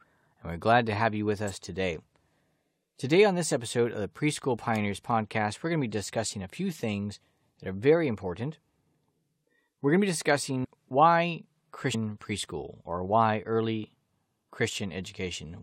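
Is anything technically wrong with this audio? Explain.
Yes, there are two kinds of fault in this speech clip.

Electrical switching spikes: sharp snaps at 1.48 to 1.50 s, right after "to have you with", and at 4.76 s, likely from a nearby switch or motor arcing onto the line.

Compressed frames skipped: at 10.63 to 10.65 s, after "going to be", and at 11.93 to 11.95 s, just before "preschool or why early", the audio jumps ahead about 150 ms. That fits roughly seven 21.3 ms frames left out.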